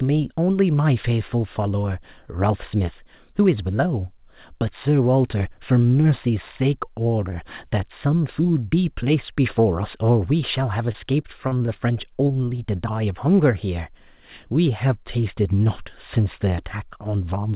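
From 10.92 to 11.78 s, the speech turns choppy and robotic. This is repeated packet loss. Six gaps, the longest 33 ms, were patched by continuing the previous sound.

At 12.28 and 12.46 s, short concealed packet loss leaves two brief smears. About 20 ms went missing each time, and the receiver filled the holes with guessed sound.

At 12.56 s, a short stall from a late packet holds one sound about 17 ms too long. Nothing is lost. Throughout, nothing is heard above 4 kHz, which fits a narrowband G.711 call path.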